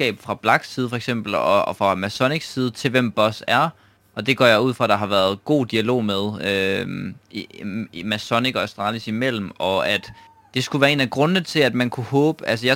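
Throughout the speech runs a gritty, inharmonic fizz from crude rate conversion: samples were kept or dropped by nearest position without filtering, which fits a 48 kHz to 44.1 kHz change. Sitting about 25 dB down, it follows bright syllables and, unlike clipping, appears without overload.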